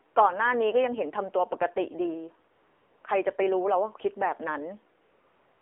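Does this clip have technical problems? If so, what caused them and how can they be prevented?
Yes. The speech sounds buzzy, thin and synthetic throughout, confined to roughly 300 Hz to 3.4 kHz. This is AMR narrowband mobile codec damage at a low rate that points to about 7.4 kbps, where few pulses drive the vocal tract model. Using a wideband codec or a higher bitrate would prevent it.

At 0.14–0.16 s, 2.54–3.04 s and from 5.02 s to the end, the real background gives way to smooth, steady hiss. This is AMR comfort noise, synthesised while no speech frames were sent. Disabling discontinuous transmission, or tuning voice activity detection less aggressively, would prevent it.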